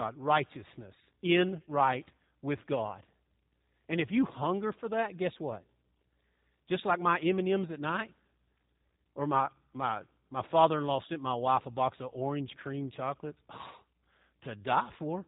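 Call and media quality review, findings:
G.729 codec, throughout: speech band-limited, nothing above 3.8 kHz, plainly rough and synthetic from sparse pulse excitation, not just telephone dullness. Fits an 8 kbit/s G.729A leg.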